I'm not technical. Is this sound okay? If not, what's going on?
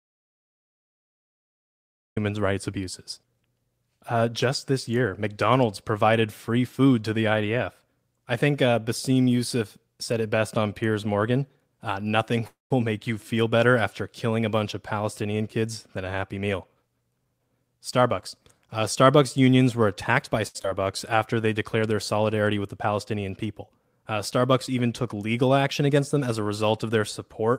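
No, there are several faults, mostly of the kind heard on internet calls.

Audio dropout to silence, from the start until 2.17 s: the clip opens in total silence, with no background hiss at all. The silence was already under way when the clip began, so whatever was said then is lost. The likely cause is the input being cut off, for example a disconnected microphone, a dropped link or an accidental mute, while the recording carried on writing nothing but silence.

Call audio freeze, 12.47 to 12.72 s: the speech stops for about a quarter of a second. The last sound is stretched into a short buzz that fades, and most of the pause, about 0.17 s, is silent. The speech then picks up exactly where it stopped, so nothing is lost, but an extra pause has been inserted. The likely cause is packets of call audio arriving late, so the receiver ran out of sound to play and had to wait.

Jitter buffer speed-up, 15.33 to 17.71 s and 25.81 to 26.39 s: the speech runs about 10 percent fast without changing pitch, so it sounds hurried. 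The receiving end had built up too much stored audio and was trimming tiny slices to catch up. It removed roughly a fifth of a second in the first stretch and under a tenth in the second.

Short stall from a late packet, 20.47 to 20.57 s, right after "unions were attacked by": one packet was late, so the receiver held the last sound for about 0.07 s until it arrived. You hear a brief drawn-out sound with a slight buzz or dip. Nothing is missing.

Short concealed packet loss, at 20.63 s: moments later, about 0.04 s of audio never arrived. The receiver patched a small part of the hole by briefly continuing the previous sound, which gives a tiny smear. A short sound may be lost there.

Jitter buffer slow-down, 21.16 to 21.47 s, just before "declared their solidarity with": the speech slows to about 91 percent speed at the same pitch, so it sounds slightly drawn out. The receiver was repeating tiny slices of sound to rebuild its reserve, which added about 0.04 s in total.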